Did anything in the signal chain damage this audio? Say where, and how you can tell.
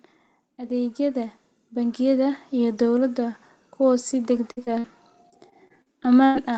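Yes. First, automatic gain rising in the call processing: from 0.58 to 3.46 s, just before "kuwo si", level climbs about 8 dB. Background swells too, which separates it from a speaker simply getting louder.

Lost packets rebuilt from error correction on the network path, at 4.35 s just after "kuwo si", then 4.57, 4.67 and 4.84 s. Each 20 ms frame turns rougher and noisier without any gap, unlike concealment.

Bursts of packet loss at 4.51 to 4.59 s and 4.79 to 4.86 s. About 60 ms goes missing each time. The sound is held and fades, then resumes further on, rather than merely roughening.

Short concealed packet loss from 4.65 to 4.69 s. A 20 ms hole is bridged by continuing the previous sound, giving a brief smear rather than an audible drop-out.

Repeated packet loss (robotic sound) from 5.30 to 6.37 s. Six separate gaps, the longest 98 ms, are patched one after another, roughly a fifth of the stretch. 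The result is choppy, with pieces missing, not a single isolated glitch.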